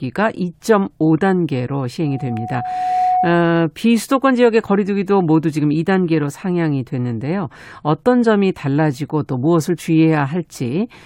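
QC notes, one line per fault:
2.04–3.48 s, loudspeaker feedback squeal. A steady 734 Hz tone swells out of the speech over roughly a second until it is about as loud as the speech. The microphone is picking up its own loudspeaker, and at this frequency the loop gain exceeds one.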